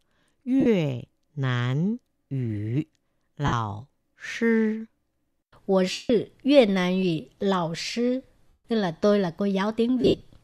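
Short noisy smears break the speech at 0.60 s (about 52 ms), 3.46 s (60 ms), 5.91 s (180 ms), 8.47 s (172 ms, just before "tức là tôi là") and 10.01 s, where gaps scatter over 225 ms with the longest run around 70 ms. These are lost LE Audio frames. The LC3 decoder fills each gap by repeating the last spectrum with random signs, and on the longer losses it fades that fill toward silence. The gap lengths fit 7.5 ms frames.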